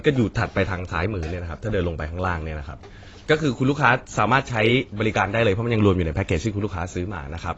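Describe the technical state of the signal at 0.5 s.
AAC compression at 0.5 s, as throughout the clip: coarse spectral quantisation removes everything above 7.9 kHz, leaving dull, smeared, warbly speech, likely from AAC-LC near 24 kbps.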